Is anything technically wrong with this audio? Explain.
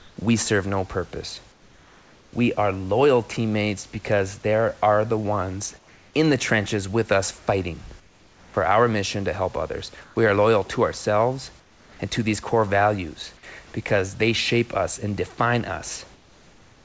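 Yes. Comfort noise in place of the background appears in seven pauses: 0.00–0.17 s, 1.52–2.33 s, 5.78–6.14 s, 8.00–8.54 s, 10.04–10.16 s, 11.60–11.99 s and 16.13–16.85 s. In each, the room's textured background turns into flat, featureless hiss, about 1 to 5 dB quieter. The likely cause is discontinuous transmission: the sender stops transmitting during silence, and the receiver fills the gap with synthetic noise roughly matched to the background.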